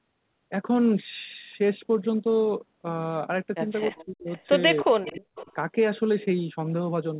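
A short speech recording shows two related faults around the middle. First, the speech is suppressed in double talk from 3.91 to 4.28 s and from 4.83 to 5.51 s. The voice dips and breaks up in pieces, falling by about 30 dB and then about 40 dB at its deepest. The likely cause is an echo canceller turning everything down while both sides spoke at once. Second, an echo leak appears at 3.96 to 4.05 s, 4.30 to 4.43 s and 5.06 to 5.53 s. A faint copy of the voice returns 309 ms late. It sits about 25, 35 and 20 dB below the speech. This is likely a loudspeaker echo that the loudspeaker side's canceller did not fully remove. Throughout, the call band stops at 4 kHz.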